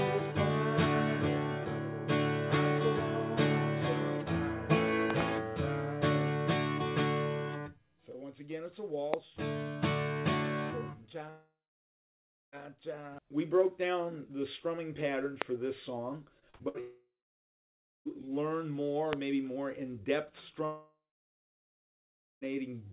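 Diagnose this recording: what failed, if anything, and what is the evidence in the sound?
Loud pop, at the analogue wiring or driver stage: a voltage step, likely from a plug, switch or static discharge, was added to the signal. It is heard as a sharp pop about 20 dB above the sound, as a quick pair at 5.10 to 5.23 s and as single pops at 9.14, 15.42 and 19.13 s, with the sound continuing underneath.

Long network dropout, at the network stage: the audio stream stopped arriving for over a second at a time. At 11.3 to 12.55, 16.80 to 18.08 and 20.65 to 22.44 s, the last sound is stretched into a fading buzz. Then roughly one second, or 1.4 s in the last case, of near-silence follows, and the sound resumes with that stretch missing. This pattern most likely reflects a stalled connection.

Repeated packet loss (robotic sound), at the network stage: from 16.39 to 16.77 s, packets were lost four times in quick succession. 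The longest gap is 59 ms, and concealment covers about 37% of the span. The patched holes give a choppy texture with pieces missing, which runs straight into the dropout at 16.80 s. Throughout the clip the band stops at 4 kHz, consistent with a G.711 call path.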